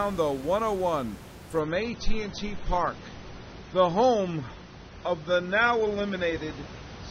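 Adaptive stream at a lower bitrate from 1.60 s to the end of this speech recording: the treble suddenly vanishes above 6.3 kHz, consistent with the stream switching to roughly 24 kbit/s AAC when the connection slowed. The room noise, about 17 dB below the speech, is part of the original recording.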